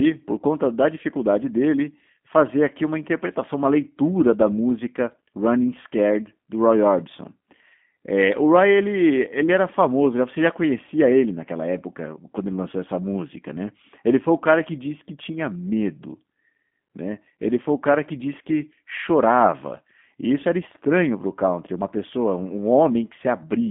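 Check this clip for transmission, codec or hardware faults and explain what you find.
The speech carries one codec fault throughout. G.729 codec: the speech is rebuilt from a vocal-tract filter and pitch predictor, confined to about 150 Hz to 3.5 kHz, giving plainly audible rough, synthetic edges. That fits an 8 kbit/s G.729A codec rather than a simple band-limit filter.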